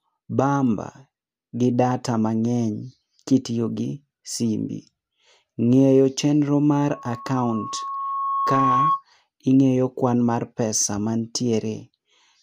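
After "ng'eyo chendo mar", 6.89 to 9.03 s, loudspeaker feedback squeal: the microphone re-amplifies its loudspeaker, and a 1.1 kHz tone swells over about two seconds above the speech.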